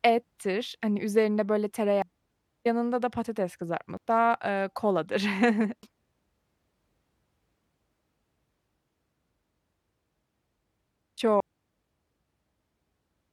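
Damaged data in a compressed stream breaks the speech four times. The first is at 2.02 s, after "ettir hani üzerinde böyle". The next is at 3.97 s, between "yanında da patates" and "eee koladır". The last two are at 5.83 s and 11.40 s. Each time the decoder misreads corrupted frames, loses sync and hunts for the next header. Each one is heard as a chirp, squawk, click or short hole.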